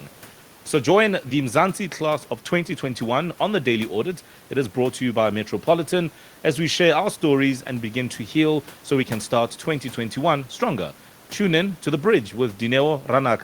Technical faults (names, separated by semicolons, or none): none